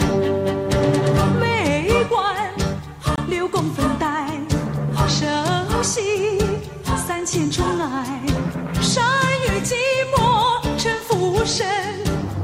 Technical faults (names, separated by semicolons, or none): block of digital silence